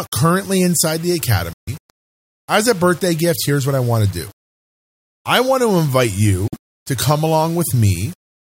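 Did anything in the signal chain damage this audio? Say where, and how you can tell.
Yes. A sample-format conversion stage likely reduced the signal to about 6 bits, rounding without dither. Throughout the speech you hear grainy, signal-following distortion roughly 25 dB below the level, roughening quiet syllables and making soft tails sputter rather than fade smoothly.

The playback link shows a Bluetooth dropout, likely packets missing their delivery deadline. The sound cuts to silence from 1.53 to 1.69 s (about 139 ms, fitting several lost frames) and from 6.48 to 6.55 s (about 46 ms), then resumes further along, as though playback continued unheard.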